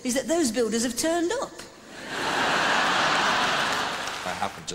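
No audible fault anywhere in the recording, no dropout, click, distortion or level jump to report.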